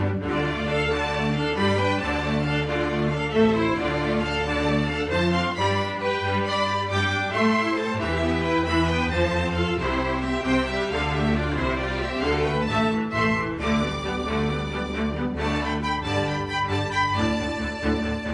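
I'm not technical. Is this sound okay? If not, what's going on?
Yes, this sound is okay, and there's nothing going on that needs fixing.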